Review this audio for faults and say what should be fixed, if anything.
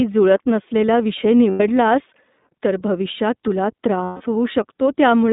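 The whole clip runs through the iLBC codec. The band is cut to about 200 Hz to 3.7 kHz. Nothing higher survives. The speech sounds clear but plainly rough and synthetic. iLBC codes each frame's excitation on its own, with no help from the frame before. That costs naturalness at this rate. The sound fits the 15.2 kbps mode with 20 ms frames. To prevent this, use a wideband codec such as Opus on the link.

There are two bursts of lost iLBC frames. The first runs from 1.50 to 1.61 s, just after "जुळत नसलेला विषय". The second runs from 4.04 to 4.22 s, just after "तर भविष्यात तुला". Each gap becomes a held, buzzy vowel. The decoder is repeating the last pitch cycle mixed with noise. The first gap fits five lost 20 ms frames. The second fits eight, and fades more. Speech recovers at once because iLBC frames stand alone. Prevent this with jitter buffering and forward error correction on the network path.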